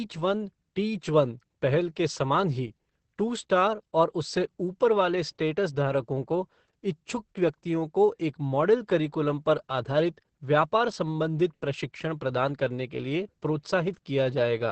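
From start to finish the speech sounds muffled, hoarse and faintly robotic, with nothing above 8.6 kHz. This is heavy Opus voice compression. The coarse linear-prediction coding points to the SILK coder at a bitrate around 10 kbps, too few bits to carry the excitation's fine detail.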